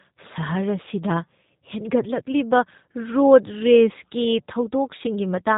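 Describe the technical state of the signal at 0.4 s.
G.729 codec coding is present at 0.4 s, as it is across the entire clip. The speech has been rebuilt from a vocal tract filter, a pitch predictor and a handful of pulses per 5 ms subframe, a sparse model that fits an 8 kbit/s voice coder. Nothing above 4 kHz survives, so the speech sounds band-limited and dull, with a plainly audible rough, synthetic texture.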